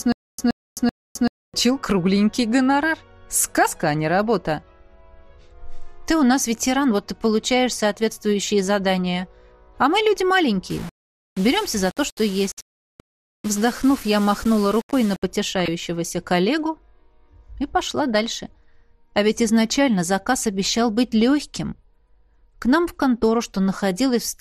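The whole thing has the dull, gurgly, granular sound of MP2 compression, likely at a low rate around 80 kbps, with upper bands flickering in and out. It opens with a stutter with silent gaps already under way: a 123 ms burst repeats every 384 ms with about 261 ms of dead silence, three times up to 1.54 s, likely from a stalled stream replaying its last fragment. From 10.70 to 15.23 s it turns gritty and grainy, likely low bit depth without dither, which fits rounding to about 5 bits, with the error sitting roughly 20 dB under the signal. At 15.60 to 15.68 s there's a short burst of DAB burbling, where reception bit errors slipped into the MP2 data, which fits a handful of corrupted frames.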